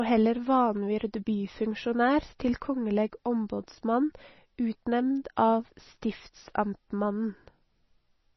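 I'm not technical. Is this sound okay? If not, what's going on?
No. Throughout the speech there is heavy MP3 compression damage, likely from a low-quality setting: nothing above about 5.9 kHz survives, so s sounds are dull, and quiet detail flickers in and out, giving a watery, swirly texture and smeared consonant starts.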